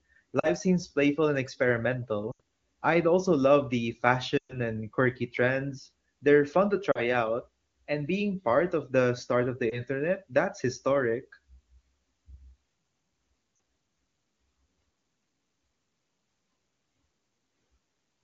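Lost AMR speech frames interrupt the audio six times: 0.39–0.48 s, 2.32–2.40 s, 4.37–4.57 s, 6.91–7.00 s, 9.70–9.81 s and 13.55–13.59 s. Frames corrupted in transmission were replaced by repeating the last good pitch and vocal tract settings at falling gain. The single lost frame at 9.70 s gives a brief dip or warble. The longest, around 120 ms at 4.37 s, drops to near silence within two frames. Unlike a plain dropout, there's no hard cut or click, only a quickly dimming sound.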